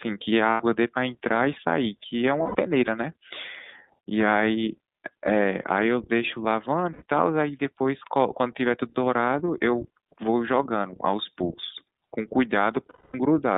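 The whole clip has passed through the iLBC codec. The speech is confined to a band of about 150 Hz to 3.7 kHz and has a plainly rough, slightly synthetic texture. This fits iLBC running 30 ms frames at 13.33 kbps.

Lost iLBC frames occur at 0.51 s (90 ms), 2.43 s (120 ms), 6.92 s (90 ms) and 12.90 s (240 ms). Each gap is filled by repeating the last pitch cycle mixed with noise, which sounds like a held, buzzy vowel. The 240 ms gap fades out, and normal speech returns almost immediately after each one.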